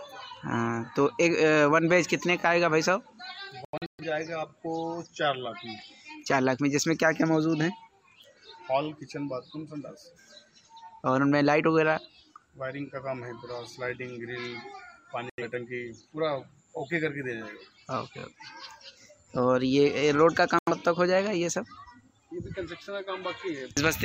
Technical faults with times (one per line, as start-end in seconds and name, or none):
3.65-4.04 digital broadcast dropout
15.30-15.43 digital broadcast dropout
20.59-20.72 digital broadcast dropout